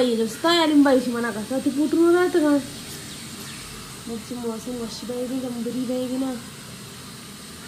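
Nothing is technically wrong with the clip.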